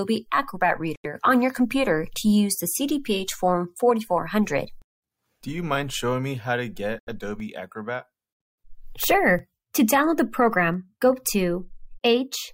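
At 0.96 s and again at 6.99 s, the sound drops to silence for about 80 ms and resumes where it stopped, likely a Bluetooth stall from delayed, resent packets.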